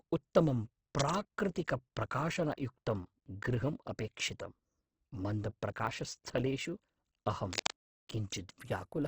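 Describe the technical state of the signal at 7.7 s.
At 7.7 s a burst of cable scratch noise is under way. It spans 7.51 to 7.74 s. Dense, uneven rustling sits over the speech at roughly its own level. A worn cable or connector being moved is the likely cause, its contact resistance jumping rapidly.

The same moment carries block size mismatch (truncated) damage. A steady buzz at 100 Hz runs under the speech. One stage writes blocks longer than the next reads, and each block's tail is discarded. The speed change is negligible here.

Opus compression damage is also present. Nothing sounds above 8 kHz. The speech is rough, grainy and noisy, as bands are filled by folding or noise. This likely points to Opus in its music mode at a low bitrate around 12 kbps.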